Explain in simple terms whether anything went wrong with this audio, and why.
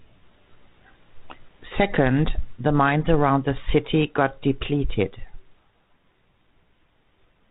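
Nothing went wrong with this audio; the speech comes through the G.726 ADPCM telephone-style coding as that coding normally sounds.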